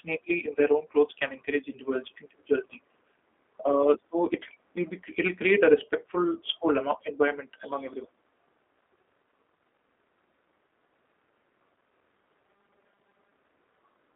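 Throughout the clip the speech sounds thin, slightly rough and synthetic, with a boxy telephone quality: nothing reaches above about 3.7 kHz, and the band sits roughly between 250 Hz and 3.5 kHz. The G.729 codec, here its G.729A variant, is plainly audible. The codec rebuilds each 10 ms frame from a modelled vocal tract, a pitch predictor and a few pulses rather than the original waveform, which points to an 8 kbit/s link.

From 12.46 to 13.32 s the voice turns into a rigid, metallic buzz at 200 Hz that only loosely tracks the speech. This is robotic sound from repeated short buffers. New audio was likely arriving too seldom, so the playback filled the gaps by looping the last 5 ms over and over. That 5 ms repetition sets the 200 Hz pitch, and roughly half of the audio in that stretch is repeats while the real material is skipped.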